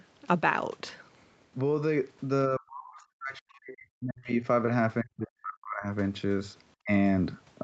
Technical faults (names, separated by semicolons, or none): speech suppressed in double talk